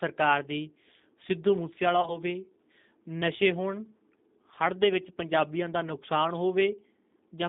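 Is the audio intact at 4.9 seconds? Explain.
No, at 4.9 s, as everywhere, G.729 coding leaves speech rough and synthetic, squeezed into about 200 Hz to 3.7 kHz, which fits an 8 kbit/s line.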